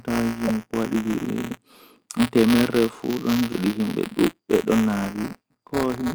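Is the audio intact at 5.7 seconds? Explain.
No. Buffer tearing runs through the whole speech clip, 5.7 s included. The writing program and the hardware reading the ring buffer have slipped, so every period contains a small sliver of audio about 20 ms stale, with a hard join at each end. That repeats at 172 Hz, which fits a 256-sample buffer, producing a steady robotic buzz that rides on the speech and vanishes in pauses. Unlike an underrun, it leaves no gaps or silent dropouts.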